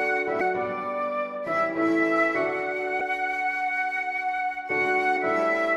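Damaged data in the compressed stream makes the decoder misread frames and lose sync, giving brief blips at 0.40, 3.00 and 5.16 seconds.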